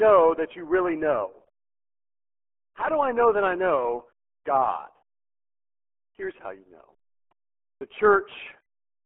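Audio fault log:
throughout — RealAudio 14.4 codec: the speech is muffled and gargly, with a thin telephone-like band running from about 250 Hz to 3.4 kHz and nothing at all above 3.8 kHz. The heavy codec damage fits an 8 kbit/s dial-up-era speech coder, which keeps only a coarse outline of the voice and discards its fine detail. A spectrogram shows a hard ceiling near 3.8 kHz and blurred, blotchy harmonics, while the waveform looks smoothed and lumpy.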